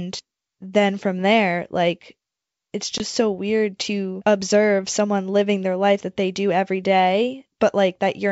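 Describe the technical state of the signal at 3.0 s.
At 3.0 s there is packet loss on the ADPCM call, spanning 2.98 to 3.05 s, between "from there like it's" and "so weird to observe". About 20 ms of audio, roughly one packet, drops out as hard-edged silence: a flat gap in the waveform and a blank vertical stripe across the spectrogram. The decoder's predictor and step size have drifted from the sender's, so the returning sound comes back slightly distorted and settles by 3.05 s. The 64 kbit/s G.722 wideband coding around it keeps its full band up to 7 kHz.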